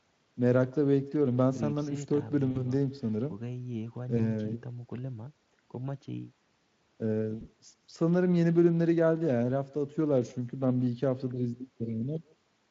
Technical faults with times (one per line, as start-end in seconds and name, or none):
0.00-12.71 echo with no canceller
2.51-2.65 VoIP packet loss concealed by the speech codec
4.17-4.27 VoIP packet loss concealed by the speech codec
7.35-7.43 VoIP packet loss concealed by the speech codec